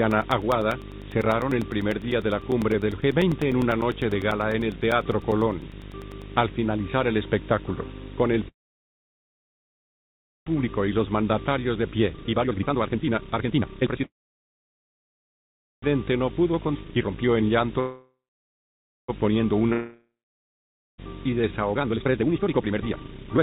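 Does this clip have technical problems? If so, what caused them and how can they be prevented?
Yes. A video or display buzz runs through the whole clip: a low 50 Hz buzz with hash above it and a whine at 15.6 kHz, sitting only about 15 dB below the signal. The 50 Hz buzz matches a display's field rate and the whine matches its line rate, so a screen or video cable is coupling interference into the audio wiring. Keeping audio cables away from monitors and video leads, and using balanced or shielded connections, prevents it.

From 0.11 s to 6.22 s there are periodic USB or driver dropouts. These are regular ticks every 0.1 s, around seventy in all, and each is a gap of roughly 4 ms of silence that can only be heard while sound is present. A background task blocks the USB bus or audio driver at a fixed interval, so a small slice of audio is lost each cycle. Finding and disabling the polling task, or updating the driver, stops it.

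There are three call audio freezes, at 8.48 to 10.48 s, 14.04 to 15.84 s and 17.80 to 19.10 s. The sound stalls and falls mostly silent for about 1.98 s, 1.78 s and 1.29 s. It then resumes exactly where it stopped, so nothing is missing and a gap has been inserted. The likely cause is packets held up in transit while the receiver's jitter buffer ran dry. A more stable network path, with wired rather than congested Wi-Fi and traffic prioritised for the call, prevents this.

Two jitter buffer speed-ups follow the delays. From 10.6 s to 19.61 s the audio plays at about 124% speed, with roughly 2 s trimmed out. From 21.73 s to the end it rushes at about 186%, with roughly 1.5 s removed. In both, the pitch stays the same while the pace sounds hurried. The receiver cut out short pitch-period pieces to work off a backlog of late packets that arrived together. Steadier delivery avoids the backlog that forces this catch-up.

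At 16.74 to 16.77 s a skip ahead jumps forward through a 12 ms join. Roughly a second of audio is lost, and the two sides are spliced almost directly. Either packets were dropped on the way or an overfull jitter buffer discarded them while later audio was already waiting. Reducing burst delays and giving the buffer adequate headroom prevents these jumps.

From 19.66 s to 21.54 s a jitter buffer slow-down stretches the audio to about 97% speed, adding 59 ms. Sounds are slightly drawn out at the same pitch, because the receiver repeated pitch periods to build up a reserve after running low or raising its target delay. Consistent packet timing removes the need for this stretching.

Overlapping that stretch is a long network dropout from 19.73 s to 21.0 s. The last sound trails off into about 0.9 s of silence, and when the audio returns about 1.26 s of it is simply gone. The likely cause is a stretch where no packets arrived at all. 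A reliable connection, with redundancy or forward error correction enabled on the call, guards against this.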